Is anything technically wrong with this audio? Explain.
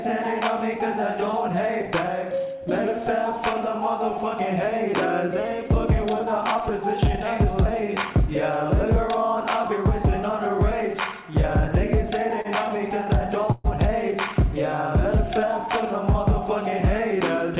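Yes, there are two timing faults, heard over a band that stops at 4 kHz, which fits a G.711 mu-law call link.

At 12.41–12.48 s there is a short stall from a late packet. The receiver stretched the last sound by 32 ms, so a held, slightly buzzy tone appears, visible as horizontally smeared spectrogram frames.

At 13.52–13.67 s there is a call audio freeze. A fading buzzy fill stretches about 126 ms, likely because delayed packets emptied the jitter buffer, and the waveform shows repeating, decaying cycles.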